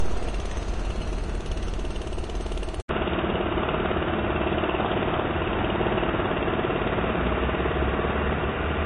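From the start, nothing sits above 10.6 kHz, a flat ceiling on the spectrogram that points to low-bitrate audio saved at a high bitrate, likely an earlier lossy pass.

At 2.81 s an 80 ms gap appears in the waveform. After that, the band narrows to 3.8 kHz and a noise floor about 30 dB down appears, likely an input switched to a poorer device.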